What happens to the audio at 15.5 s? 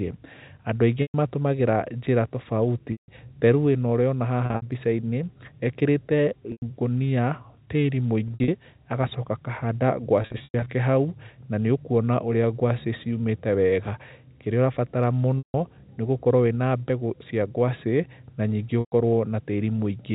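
Packet loss with pitch repetition spans 15.38 to 15.54 s, a 160 ms gap consistent with eight 20 ms packets. The last pitch period repeats as a brief buzzy hold, fades to silence, then the speech cross-fades back. On a spectrogram, identical repeating harmonic stripes end in a blank gap.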